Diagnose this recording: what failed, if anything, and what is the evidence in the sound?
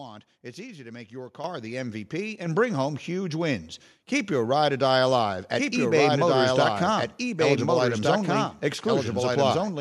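The microphone volume got stepped up twice by the call processing's level control: at 1.44 s the whole signal, voice and room alike, jumps about 9 dB, then again at 2.46 s by about 5 dB. The software judged the input too quiet and raised the device gain abruptly.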